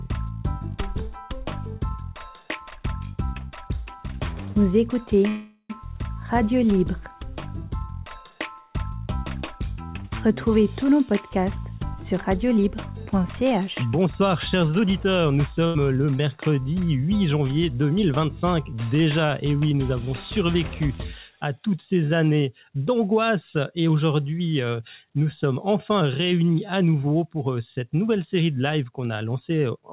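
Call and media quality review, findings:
Held, fading buzz or hiss from 5.28 to 5.71 s, brief silence at its tail, then the sound resumes intact but later. Likely call audio freeze: jitter buffer underrun, with about 0.41 s of concealment inserted and nothing lost.

Hurried delivery at unchanged pitch at 12.13 to 12.67 s (109%), 13.18 to 15.08 s (106%), 18.21 to 18.88 s (108%), and 26.00 to 27.46 s (109%). Jitter buffer speed-up: pitch-period chunks trimmed to drain excess buffered delay.

Short decaying buzz or hiss at 15.67 to 15.77 s, then a jump ahead with about 80 ms missing. Burst of packet loss: the receiver extended and faded the last sound over the gap.

Throughout, the sound is band-limited to 4 kHz, which fits the G.711 A-law WebRTC call path at 64 kbps.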